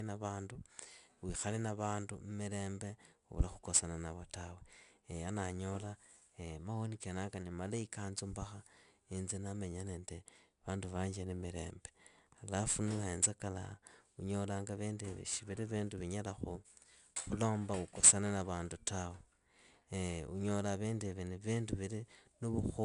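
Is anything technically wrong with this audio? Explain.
Yes, the whole clip carries 4-bit ADPCM compression. Each sample is coded as a coarse step from a prediction, so a gritty hiss rides on every loud passage of speech. The top end stops near 10.6 kHz, which points to a reduced sample rate.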